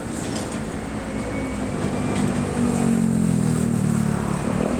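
No technical faults can be heard anywhere in the audio.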